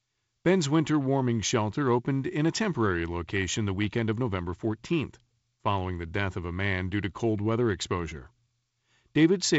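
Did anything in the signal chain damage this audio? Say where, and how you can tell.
No, the speech shows only the ordinary character of G.722 wideband telephone coding, with nothing above about 7.7 kHz and the light grain in the low band that points to its 48 kbit/s mode.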